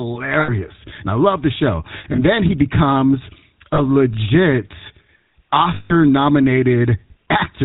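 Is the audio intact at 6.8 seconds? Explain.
No. At 6.8 seconds the speech carries the damage of the GSM full-rate codec, which runs through the whole clip. The codec rebuilds the voice from a vocal-tract model excited by sparse, regular pulses, and the plainly audible roughness fits its 13 kbps rate. Nothing survives above 4 kHz, and the voice turns buzzy and gravelly. Plain telephone band-limiting would sound muffled but clean, without this rasping, pulse-driven grain.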